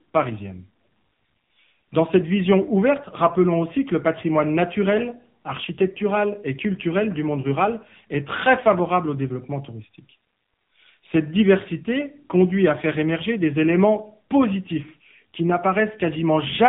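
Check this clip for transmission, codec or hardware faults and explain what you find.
One codec fault runs through the whole clip. AMR narrowband mobile codec: speech is rebuilt from a vocal-tract model at a low bitrate, consistent with 6.7 kbps, with nothing above 3.8 kHz, so it sounds muffled, buzzy and heavily synthetic.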